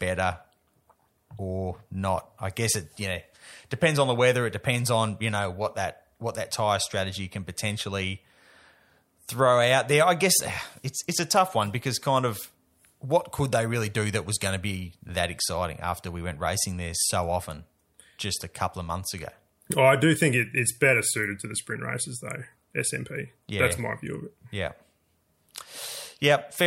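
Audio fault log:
No faults detected in the speech at any point in the clip.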